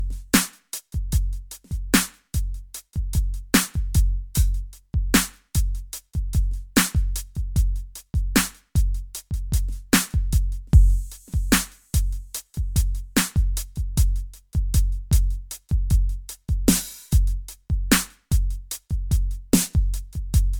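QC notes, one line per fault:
Throughout: generation loss. The music sounds swirly, smeared and hollow, with blurred attacks, likely from about four passes through an MP3 codec, which fits a 128 kbit/s chain. The spectrogram shows accumulating holes and speckle below a cutoff at 20 kHz, and the waveform shows softened transients.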